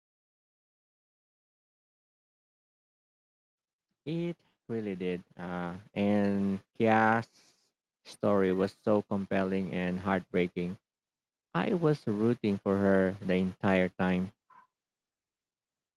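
Automatic gain rising sets in at 4.68 s and runs until 6.62 s. Over those two seconds the level climbs by about 8 dB, because the gain control judged its input too quiet and kept turning itself up. The voice and the background noise swell together, so the background behind the speech grows as the speech does, rather than the voice alone getting louder.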